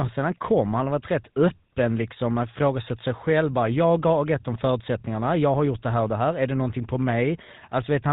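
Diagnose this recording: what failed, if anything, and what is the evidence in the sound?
The failure is at the codec stage, through the whole recording. The speech carries a plainly audible buzzy, gravelly roughness and nothing above 4 kHz. That is the GSM full-rate codec, which fits its 13 kbit/s rate. It drives a vocal-tract model with sparse, regularly spaced pulses, losing the fine excitation detail.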